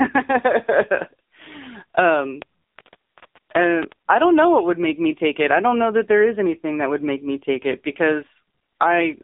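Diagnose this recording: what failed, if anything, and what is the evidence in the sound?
The failure is at the codec stage: the speech has passed through the AMR narrowband mobile codec (AMR-NB) for its whole length. Nothing is heard above 3.8 kHz, and the band runs from about 200 Hz to 3.7 kHz. A simple telephone-line filter would narrow the sound the same way, but here the damage is heavy. The speech is buzzy and synthetic, rebuilt from a coarse vocal-tract model, which fits a low mode of around 6.7 kbps.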